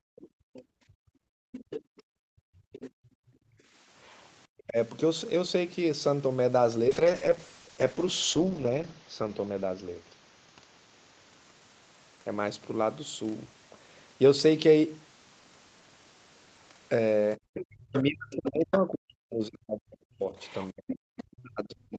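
Right from the start, 0.0 to 3.75 s, the room background gets gated by the echo canceller. The mic is being ducked while the loudspeaker plays, so the ambience keeps dropping away, as far as about 36 dB down, for roughly three seconds of that stretch, then comes back.

Inside that window, 0.18 to 2.91 s, a second, fainter voice sits about 20 dB under the talker. That's most likely the other side's voice leaking through, because the canceller didn't fully strip the loudspeaker out of the mic. A much quieter trace of it returns at 4.03 to 4.63 s, about 35 dB down.

Right after, at 4.65 to 4.77 s, the talker's own voice briefly dips by roughly 25 dB. It's likely speech suppressed in double talk: with both sides going at once, the canceller turned everything down.

From 6.88 to 12.09 s there's a call bitrate drop. Opus falls from 32 to 8 kbps and stays at the floor for 1.78 s. The voice goes rough and watery, losing clarity, until the rate climbs back.

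The ending is messier. From 17.37 s to the end the talker gets pushed down hard in pieces, by as much as roughly 40 dB, which again points likely to speech suppressed in double talk. The background also gates out at 17.38 to 17.54 s, and the other side leaks through at 17.54 to 18.36 s, about 15 dB under the talker, and at 20.39 to 21.23 s, about 20 dB under.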